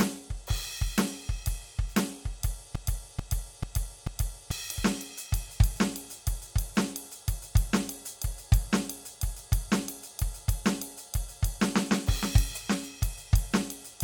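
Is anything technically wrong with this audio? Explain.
Yes. From 2.75 to 4.51 s there is a broken-record loop: the player or stream likely stalled and kept resending its last buffered fragment, so a 0.44 s slice of the music repeats exactly four times back to back, and the music meant for that stretch is lost.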